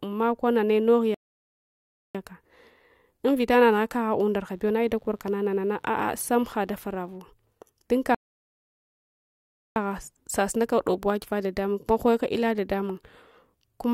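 Rebuffering stalls at 1.14–2.15 s, after "nane nog", and 8.15–9.76 s, before "sasunaka dob wagiva dadamung", cut this speech clip to silence for about 1.0 s and 1.6 s. Playback ran out of data and resumed exactly where it stopped. Mains buzz from 4.41 to 7.19 s, after "invita nanugha kagha unda", is a faint, raspy 50 Hz hum, well below the speech, with harmonics reaching into the kilohertz range.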